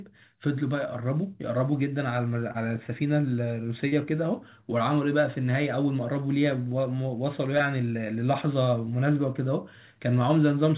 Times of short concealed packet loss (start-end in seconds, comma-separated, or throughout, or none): 2.52-2.56, 3.88-3.94, 7.58-7.62